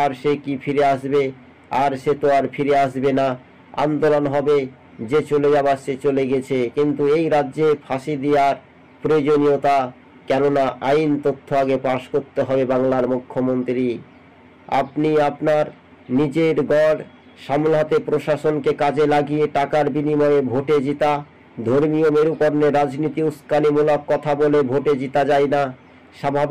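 No technical faults can be heard anywhere in the audio. Nothing in it points to a problem in how it was captured or delivered.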